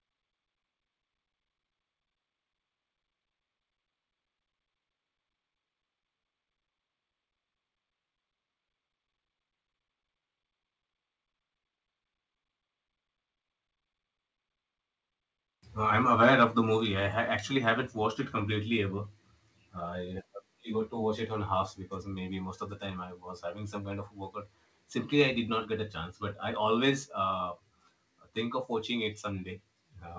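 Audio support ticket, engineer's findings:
Harsh, crackly edge on loud speech, 16.23–16.44 s. Peaks driven about 4 dB past converter full scale, tops flattened on a small share of samples. Likely microphone overload: mic input gain set too high.

Sudden drop in level, speech and background together, at 16.8 s, about 4 dB down, directly after the distorted burst. Likely microphone volume stepped down by the call software's gain control reacting to clipping.

Second step down at 26.91 s, about 2 dB, likely same mechanism. Further single-step cut to mic input gain, no ramp.

Band limit at 8 kHz consistent with the G.722 wideband call path.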